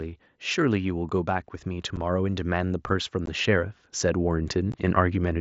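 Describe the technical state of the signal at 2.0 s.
At 2.0 s the level is partway through an automatic gain rising that runs from 0.54 to 5.36 s. The control judged the input too quiet and is lifting its gain by about 10 dB in total. Voice and background noise swell together, which separates it from a talker simply speaking louder.

Just before, at 1.96 s, there is unconcealed Bluetooth headset packet loss. A gap of about 7.5 ms, which fits a single lost headset frame, leaves a short hole with hard edges that can click. Because nothing fills the gap, it sounds like a brief cut rather than a smeared or repeated fragment.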